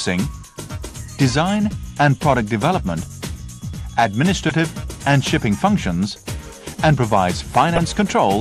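From start to end the sound is dull and grainy, with a gurgling edge. Upper bands seem to switch in and out. This is likely MP2 compression, with too few bits to keep the top sub-bands alive. The damage fits a low rate around 80 kbps.

From 7.76 to 7.78 s there is a brief burst of DAB burbling. Bit errors slipped past error correction into the audio data. Wrong samples put short blips of noise in single sub-bands. The burst fits about three damaged frames, from a small error rate.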